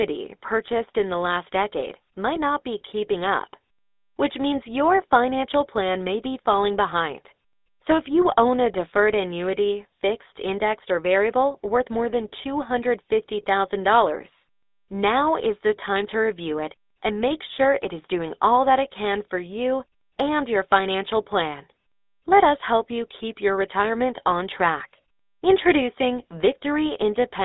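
A speech clip carrying GSM full-rate codec damage from start to finish. The line band runs from about 250 Hz to 3.7 kHz, so the voice sounds thin and boxed. A buzzy, gravelly roughness is plainly audible, which fits the original 13 kbps GSM mobile codec.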